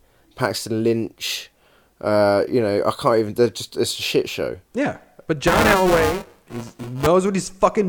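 From 5.47 s to 7.07 s, the program filling the playback ring buffer and the hardware draining it have drifted out of step, so their positions cross within every period. In this stretch, about a fifth of each buffer replays speech from a few milliseconds earlier, spliced in with abrupt edges. The speech takes on a steady robotic buzz at 375 Hz, which fits a 128-sample buffer, and it persists throughout this span of buffer tearing.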